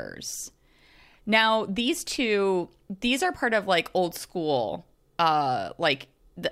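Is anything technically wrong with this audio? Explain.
No, nothing technical stands out here; the speech comes across steady and intact, with nothing in the signal drawing attention to itself.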